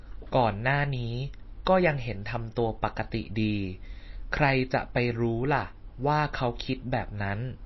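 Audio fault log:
throughout: MP3 compression, likely. Nothing gets through above 5.8 kHz and the speech sounds watery and swirly, which fits an encoder starved at around 24 kbps.
1.65 s: pre-echo. A short hiss sneaks in 14 ms before a sharp attack, because quantisation noise gets spread across the whole block, so the onset sounds smeared.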